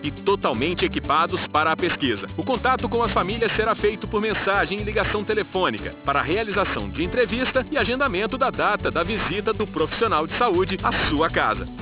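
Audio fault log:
Throughout: aliasing. Content above 4 kHz folds back below that edge as wrong, unrelated frequencies, which fits a drop to an 8 kHz rate without an anti-alias filter. The folded energy sits roughly 10 dB under the signal, making the top end gritty and metallic.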